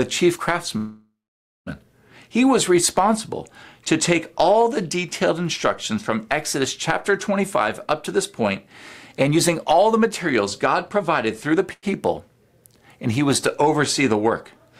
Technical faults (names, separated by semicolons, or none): call audio freeze; jitter buffer speed-up; short stall from a late packet